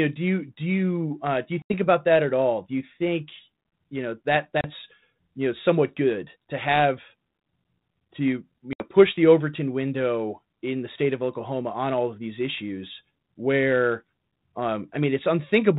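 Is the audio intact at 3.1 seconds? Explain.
Yes, the audio is intact at 3.1 seconds, with no fault at that point.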